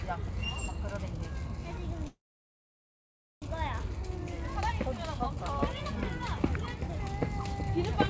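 At 2.08 s the sound stalls until 3.45 s: a brief fading tail, then about 1.23 s of silence, and it resumes right where it left off with nothing skipped. That's a call audio freeze, likely packets stuck in transit draining the jitter buffer, all heard through a band topping out at 8 kHz, which fits G.722 at 64 kbps.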